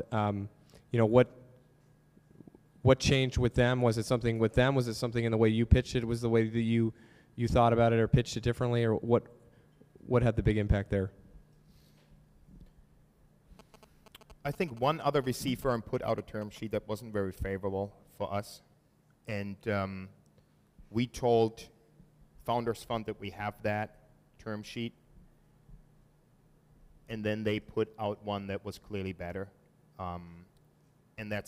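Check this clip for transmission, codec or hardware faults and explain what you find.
One fault stands out: GSM signalling bursts. From 13.59 to 16.58 s, a galloping dit-dit-dit of short buzzes at about 217 Hz sits roughly 25 dB below the sound. A nearby 2G phone's signalling radio bursts are being rectified by the audio circuitry.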